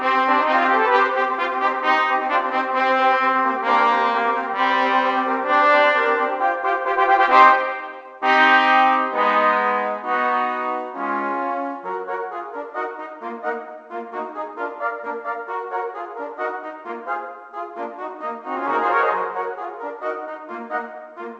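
Nothing is technically wrong with this audio; it has come through a WebRTC call path whose band limit, with nothing above 8 kHz, fits a G.722 codec.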